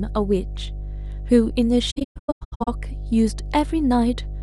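A ground loop or nearby transformer is leaking the 50 Hz power line into the signal for the whole clip. The mains hum sits as a steady low drone with some low harmonics, strong enough to stay only about 10 dB below the speech throughout.

From 1.90 to 2.68 s, AAC frame loss with muting sets in. Many frames were dropped and the decoder zeroed them, so around 0.62 s of the 0.77 s span goes missing in soft-edged holes, the longest roughly 150 ms.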